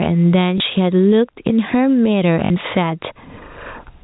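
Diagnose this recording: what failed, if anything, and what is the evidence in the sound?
The level never sits still, swinging somewhere around 25 dB. That's gain pumping, likely from input gain set way too hot with a fast limiter clamping down on every peak.

On the network side there's packet loss with the last packet repeated. You get a small blip at 0.58–0.60 s and a longer buzzy robotic stutter at 2.46–2.50 s. The receiver replayed stale audio for about 20 ms, then 40 ms, which fits one and then two lost 20 ms packets.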